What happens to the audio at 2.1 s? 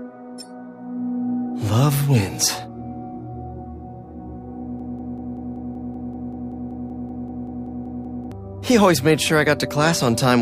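Nothing goes wrong at 2.1 s; the audio plays through that moment intact, with no dropout, click or other fault.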